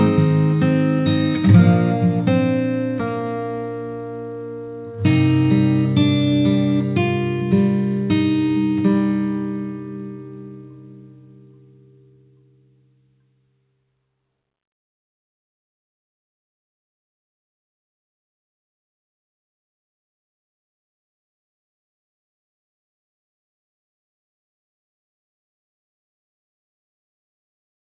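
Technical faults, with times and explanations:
The sound carries the ordinary character of a narrowband call path, with its content stopping at about 4 kHz in a way that fits a 64 kbps G.711 mu-law link working as intended.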